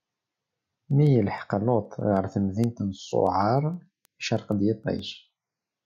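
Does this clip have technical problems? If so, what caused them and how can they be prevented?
Yes. The speech carries word clock ticks from 0.13 s to 5.78 s, a steady train of sharp clicks about every 0.15 s, around 40 in all, some louder than others. The receiving device is running on its own clock rather than locking to the incoming digital stream, and the two rates differ by something like 150 ppm. Each time they drift a full sample apart, one sample is dropped or repeated, leaving a brief discontinuity in the waveform. To prevent this, lock the receiver's clock to the incoming digital signal or to a shared word clock source.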